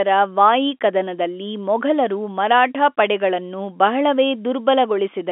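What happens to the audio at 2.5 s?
Nothing goes wrong at 2.5 s: the speech carries on intact through that moment, still within the narrow telephone band it has throughout.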